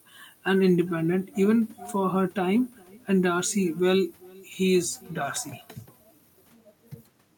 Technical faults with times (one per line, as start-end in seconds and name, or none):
0.00-7.37 echo with no canceller